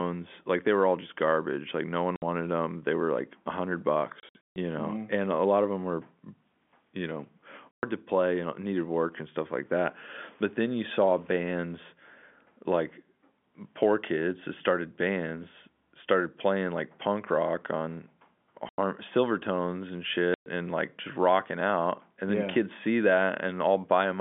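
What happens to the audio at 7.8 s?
Packet loss filled with silence cuts a 120 ms hole from 7.71 to 7.83 s, which fits four 30 ms packets. The receiver plays silence, with hard edges.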